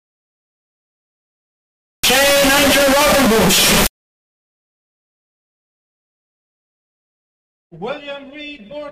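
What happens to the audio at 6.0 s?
From 1.49 to 6.49 s, float read as integer makes the sound loud, harsh and nearly square. Likely 32-bit float samples were decoded as integers.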